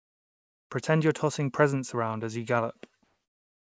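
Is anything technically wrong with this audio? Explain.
Yes. From 3.04 s to the end at 3.71 s, the real background gives way to comfort noise, a smoother, detail-free noise about 1 dB quieter. That's likely discontinuous transmission: the sender stopped sending once speech ended, and the receiver filled the gap with synthetic noise.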